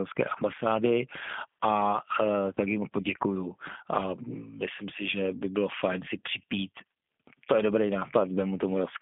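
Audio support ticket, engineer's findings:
G.729 codec throughout: band limited to roughly 200 Hz to 3.5 kHz, rough, synthetic speech texture with plainly audible coding damage. The pitch-and-filter rebuild fits an 8 kbit/s CELP stream, unlike plain lowpass telephone filtering, which stays smooth.

VoIP packet loss concealed by the speech codec, 2.55 to 2.61 s: brief stretched sound, buzzy or noisy, fading rather than a silent gap or click. About 20 ms missing points to one lost packet; decoder extrapolation, with weak recovery trailing into following frames.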